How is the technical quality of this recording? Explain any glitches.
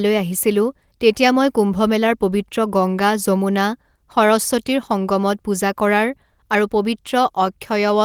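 No glitches or technical faults can be heard here.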